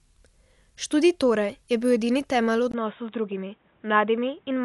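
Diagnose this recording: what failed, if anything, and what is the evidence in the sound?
The codec stage failed. The whole recording sounds dull, with nothing above 11.5 kHz. A rough, fluttering noise clings to tonal parts of the speech. The encoder is starving many frequency lines and the decoder is filling them with noise. This is likely Dolby Digital compression at a low rate, near 64 kbps.

The input stage changed mid-recording. At 2.72 s there is a 20 ms silence. After it the sound turns boxy, with nothing above 3.8 kHz. The level drops about 5 dB. A new background noise sits roughly 40 dB below the speech. This is likely an input switched to a poorer device.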